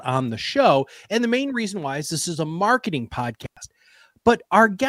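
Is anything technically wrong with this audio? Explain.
Yes. At 3.43 s the speech drops out because of an intermittent contact, with signal returning by 3.57 s. The line stays open for about 102 ms, which fits a loose cable or plug briefly losing connection. As the contact breaks and then remakes, the connection flickers and produces a short crackle at each edge of the gap. While the line is open the speech disappears and only a faint hiss remains.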